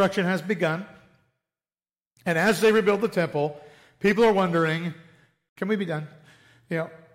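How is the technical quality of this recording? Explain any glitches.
The technical quality of this recording holds up, with no glitches to explain.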